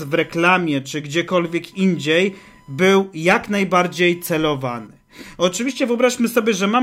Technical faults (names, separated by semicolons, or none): computer activity noise